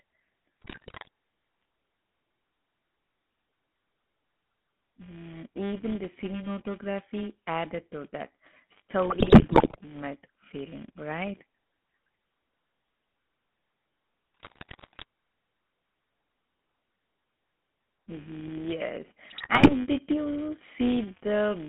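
Speech is carried through a filter that restarts from silence at the start of every block, so each block opens with a small transient. These repeat 200 times a second, producing a steady buzz at 200 Hz whose loudness rises and falls with the speech. The whole clip has also passed through the GSM full-rate codec, which fits 13 kbps. It rebuilds the voice from a vocal-tract model excited by a coarse, regularly spaced pulse train, and the line band runs from about 200 Hz to 3.6 kHz, giving a plainly audible buzzy, gravelly roughness with no highs. On top of that, GSM bit errors reach the decoder at 0.62 to 1.08 s, 9.10 to 9.77 s, 14.34 to 15.04 s and 19.30 to 19.73 s. The sound points to roughly 3 to 6 percent of bits flipped. Corrupted filter, pitch and gain values warp the spectrum and level frame by frame, breaking the speech into squawks, pops and gargling.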